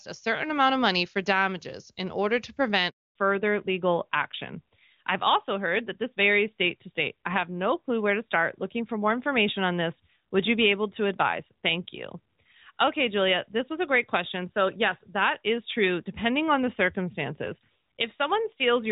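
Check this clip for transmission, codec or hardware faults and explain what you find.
Two transmission faults are audible, one directly following the other.

A handover gap runs from 2.89 to 3.15 s, right after "damages in order to". During a network switch, no speech frames reached the receiver for about 260 ms. The sound fades within a few tens of milliseconds and stays silent until the new link takes over, so whatever was said there is lost. A waveform shows the envelope collapsing to a flat line for a quarter second; a spectrogram shows a blank vertical band across all frequencies.

A fallback to narrowband follows at 3.15 s and lasts to the end. Before the gap, the HD Voice wideband codec carries energy up to about 7 kHz, and the audio sounds clear. After it, the call lands on a narrowband AMR codec, which fits the 12.2 kbit/s mode, and nothing survives above 4 kHz. Sibilants lose their edge and the sound turns duller and rougher. 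On a spectrogram, the upper region goes abruptly empty at 3.15 s, leaving a hard horizontal ceiling at 4 kHz.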